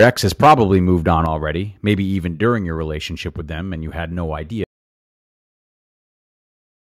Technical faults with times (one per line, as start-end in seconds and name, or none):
0.00-0.10 microphone overload
0.04 microphone volume stepped down
0.43-1.13 microphone overload
1.26 microphone volume stepped down
2.28 microphone volume stepped down
3.30 microphone volume stepped down
4.64-6.89 audio dropout to silence